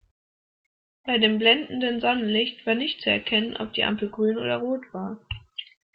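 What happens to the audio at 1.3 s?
Nothing goes wrong at 1.3 s: the speech there carries through without any dropout, click, distortion or other audible fault.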